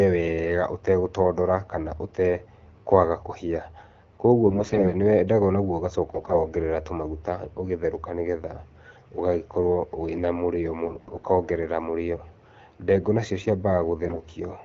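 Four short bursts in this speech clip turn hoarse, scratchy and gargly while pitch and loudness stay roughly steady: 4.46–4.92 s, 6.10–6.42 s, 10.85–11.26 s and 14.05–14.24 s. These are AMR bit errors. Around one bit in ten of the less protected data in each frame arrived flipped (about 7% in the third burst), so the excitation pulses and the finer spectral and gain values decode wrongly. The underlying wideband AMR coding sounds clean.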